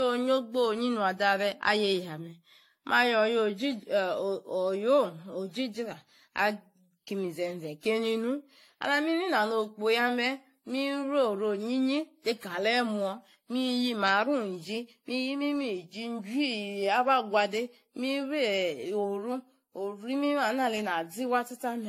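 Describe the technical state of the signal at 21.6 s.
At 21.6 s the speech carries the same generation loss heard across the whole clip. The band stops at 16.5 kHz, and the sound is swirly, hollow and smeared, with consonant attacks softened. The likely cause is repeated lossy re-encoding, around seven passes of an AAC-style codec at a rate that sounds close to 64 kbit/s. Each pass quantises again on a shifted frame grid, so noise and spectral holes pile up beyond what that bitrate alone would leave.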